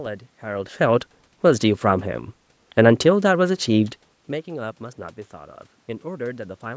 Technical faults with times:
none

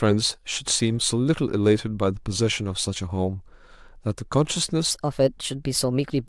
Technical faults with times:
4.91-6.28 section at the wrong speed

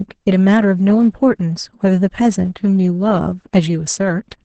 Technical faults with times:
0.00-4.45 Opus voice compression

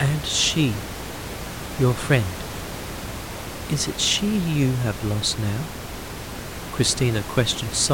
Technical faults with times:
none

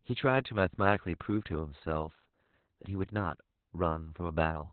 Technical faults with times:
0.00-4.73 Opus voice compression

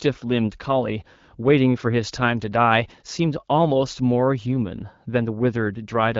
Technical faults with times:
none

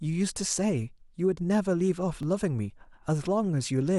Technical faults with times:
2.23 overlap between stream segments

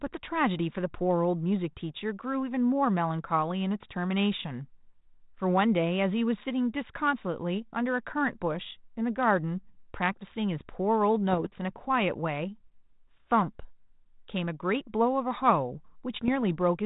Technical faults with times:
6.74 bit errors on an ADPCM link
11.31-11.46 bit errors on an ADPCM link
16.14-16.29 bit errors on an ADPCM link

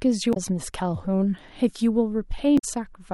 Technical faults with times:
0.30-0.37 damaged data in a compressed stream
2.55-2.64 damaged data in a compressed stream

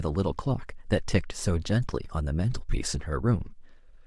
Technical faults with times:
0.00-4.06 Bluetooth LC3 compression
3.46 lost LE Audio frames

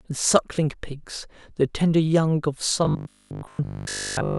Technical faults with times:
2.85-4.38 robotic sound from repeated short buffers

